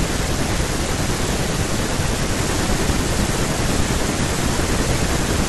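Listening to the speech in this clip, nothing stands out as a technical problem.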